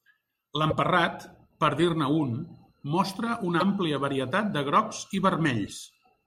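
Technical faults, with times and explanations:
0.69 to 0.73 s, 3.59 to 3.63 s and 5.66 to 5.69 s, broken MP3 bit reservoir: at each point the speech skips forward and a brief glitch, about 30 ms long, replaces it. The likely cause is missing MP3 frames; the frame after each gap reaches back into the reservoir for borrowed bits and decodes bytes belonging to another frame instead. Each disturbance spans roughly one frame, which fits 26 ms MP3 frames.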